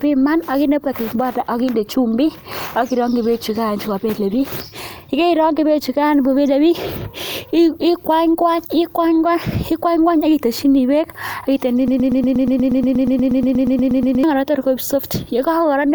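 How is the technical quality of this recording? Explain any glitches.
The recording has one clear glitch, a broken-record loop in the speech from 11.88 to 14.24 s. The likely cause is a stall in the player, encoder or stream, which kept resending the last fragment it held instead of new audio. A slice about 0.12 s long repeats identically, back to back, around 20 times, producing a rapid mechanical stutter for over two seconds. The speech that belonged in that stretch never plays.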